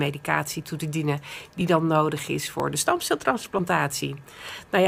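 A recorder likely dropping a sliver at each 1-second chunk boundary causes audio missing between chunks: abrupt skips of roughly 10 ms at 0.62, 1.61, 2.60 and 4.58 s.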